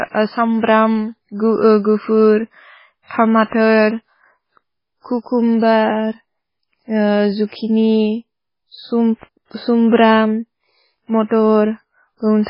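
MP3 compression throughout: heavy, watery swirl and no content above 5.2 kHz, likely from an encoder short of bits, consistent with roughly 16 kbps.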